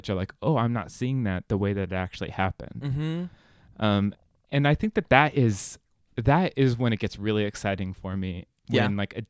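No technical faults are audible.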